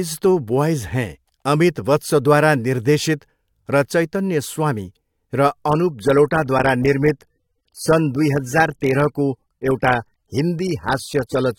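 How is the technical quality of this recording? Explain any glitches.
The speech recording loses quality partway through, from 5.68 s to the end. An adaptive stream at a lower bitrate took over: a slowed connection made the player switch encodings, consistent with dropping from about 96 to under 30 kbit/s. The switch is abrupt with no gap, treble thins with nothing above 16.6 kHz, and codec artefacts rise.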